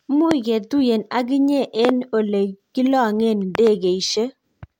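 Speech with three loud pops, roughly 15 to 20 dB above it: one at 0.31–0.33 s, doubles at 1.85–1.91 s and 3.55–3.69 s. Each is a sharp waveform spike and a full-height spectrogram stripe, likely a voltage pulse from a plug, switch or static.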